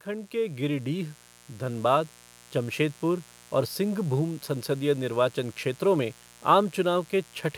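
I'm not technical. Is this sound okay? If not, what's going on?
No. A mains buzz runs through the whole recording: a steady, raspy hum from interference by the 60 Hz electrical supply, fairly quiet but clearly present behind the speech. From 0.05 to 1.89 s there is automatic gain rising: the recorder judged the input too quiet and gradually turned itself up, so the voice and background swell noticeably together.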